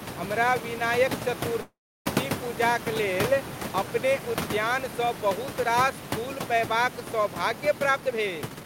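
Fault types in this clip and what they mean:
call audio freeze: From 1.61 to 2.08 s, right after "हमरा विनायक", the sound stalls. The last sound carries on briefly as a fading buzz, then drops to near-silence for roughly 330 ms, and the speech resumes where it left off with nothing lost. This is likely a jitter buffer that ran empty while packets were held up in transit. The receiver filled about 444 ms, so everything after this point plays 444 ms later.
jitter buffer speed-up: From 7.80 to 8.64 s the speech runs at about 134% of normal speed but keeps its original pitch, so it sounds hurried rather than higher. The jitter buffer was holding more audio than its target, so the receiver repeatedly cut out short pieces one or a few pitch periods long. In total it removed roughly 0.3 s to bring the delay back down.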